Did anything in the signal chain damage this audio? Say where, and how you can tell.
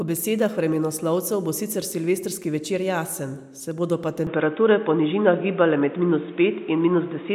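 Yes. At 4.27 s the sound abruptly turns dull and boxy and stays that way to the end, with nothing above 3.8 kHz. The level shifts by around 5 dB, and a new noise floor appears, roughly 30 dB below the signal, with no gap at the changeover. This is likely an input switched to a poorer device at the capture stage. A codec bandwidth drop would narrow the band but would not bring its own noise and gain change at the same instant.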